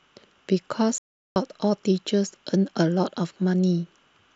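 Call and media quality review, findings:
Playback stall, 0.98 to 1.36 s: speech cuts out mid-flow for 378 ms, then resumes. Likely player buffer underrun or blocked audio thread starving output.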